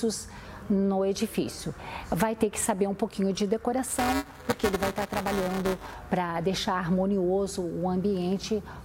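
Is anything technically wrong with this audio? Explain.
Yes. Buffer tearing from 3.88 to 5.95 s: writer and hardware slip, so a small slice of each buffer repeats audio a few milliseconds old, causing a robotic 345 Hz buzz that fits a 128-sample buffer.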